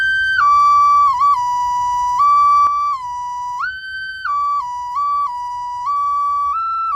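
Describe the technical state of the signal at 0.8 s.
At 0.8 s the signal is intact, with no dropout, distortion, glitch or other technical fault audible at that moment.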